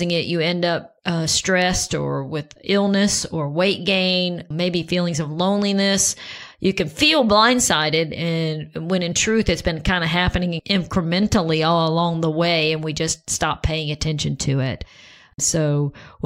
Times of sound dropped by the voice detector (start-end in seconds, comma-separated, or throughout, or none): none